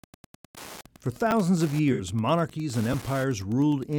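Wi-Fi interference runs through the whole recording as a steady tick about ten times a second. The interval matches a 102.4 ms beacon period, which points to a nearby Wi-Fi radio whose transmissions are picked up and rectified by the audio circuit, so each beacon becomes a small click. The ticking sits roughly 20 dB below the speech.

At 1.31 s there is a repeated buffer. The playback device did not receive new audio in time and played the previous 10 ms block a second time, which fits a 10 ms buffer. Because the block is so short, the hard join is heard as a brief click or buzz rather than a recognisable stutter, and roughly 10 ms of fresh audio is skipped.

From 1.92 to 2.01 s, just before "monarchies and", there is AAC frame loss with concealment. About 64 ms of coded audio went missing, which points to three lost frames. The decoder filled the gap by extrapolating from the last good spectrum, producing a short smeared, noisy or phasey patch in place of the real signal.

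A second repeated buffer follows at 2.93 s, just after "monarchies and". It is the same 10 ms double play and produces the same short click-like glitch.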